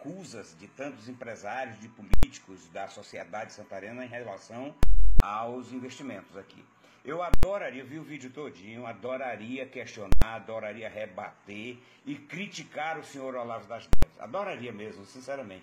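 Invalid numbers at full scale occur five times, at 2.14–2.23 s, 4.83–5.20 s, 7.34–7.43 s, 10.12–10.22 s and 13.93–14.03 s. A calculation produced infinite or invalid values that were clamped to the extreme sample value, pinning the output at one extreme value, far beyond the audio's peaks. The four 93 ms events, which fit a 4096-sample block, each land as a single loud bang. The 370 ms event at 4.83 s, fitting a 16384-sample block, gives a sharp pop at each edge with no sound between.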